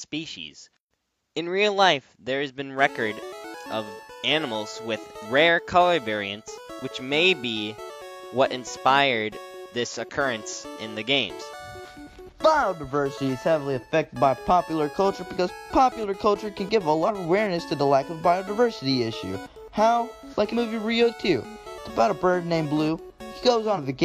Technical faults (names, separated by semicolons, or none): compressed frames skipped